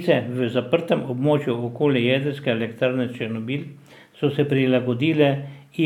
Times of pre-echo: none

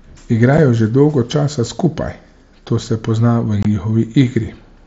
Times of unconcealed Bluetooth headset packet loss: 0.57, 3.63-3.65

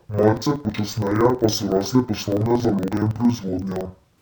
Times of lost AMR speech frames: none

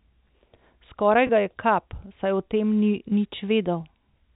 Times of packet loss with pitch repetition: 1.27-1.29

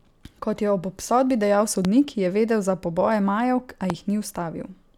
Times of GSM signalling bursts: none

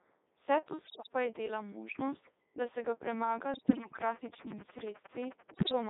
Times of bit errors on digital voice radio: 0.84-1.08, 3.54-4.02, 5.54-5.72

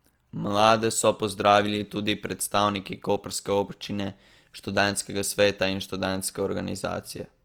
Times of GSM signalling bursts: none

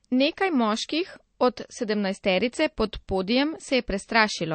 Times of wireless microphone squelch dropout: none

